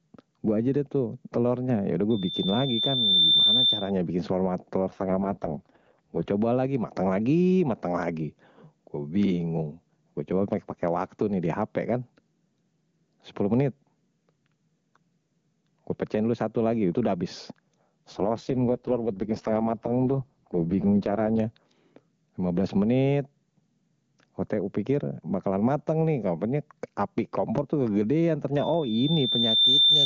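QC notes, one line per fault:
QC notes, one line per fault:
Throughout: gain pumping. The level keeps being pulled down on louder passages, swinging by about 10 dB and squashing loud and soft parts closer together, likely a fast limiter fighting gain that's set too hot.
2.1 to 3.9 s: loudspeaker feedback squeal. A single 3.6 kHz tone creeps up over roughly a second and a half until it sits around 10 dB above the speech, then stops.
4.89 to 6.28 s and 18.11 to 21.40 s: AMR rate drop. The speech goes rough and synthetic with no gap, as the codec falls from 23.85 to 6.6 kbit/s, then clears once the rate climbs back.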